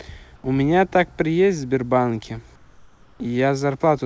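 A speech clip in which the pauses from 0.36 to 0.44 s and from 2.56 to 3.20 s lose their real background and instead carry comfort noise in place of the background. It is a steady, featureless hiss about 3 dB quieter than the surrounding room sound, which itself sits about 33 dB below the loud parts. The likely cause is discontinuous transmission, with the receiver synthesising noise while the sender is idle. Unlike a noise gate, which drops to near silence, these gaps stay filled with smooth, detail-free noise. Nothing is heard above 8 kHz, which fits a wideband call codec such as G.722.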